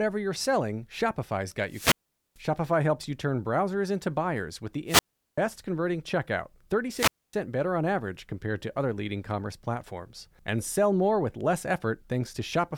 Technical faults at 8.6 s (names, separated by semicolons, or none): none